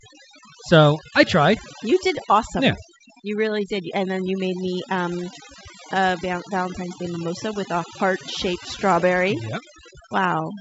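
A speech recording with overdone noise removal running for its whole length. The noise reduction was set too aggressive, so frequency bands sitting near its noise estimate are pulled far down or switched off, and the quieter parts of the voice are cut along with the noise. The background drops and breaks up into twinkling specks. The band stops at about 7.7 kHz, consistent with G.722 wideband telephone coding, with only faint coding hiss that fits the 64 kbit/s mode.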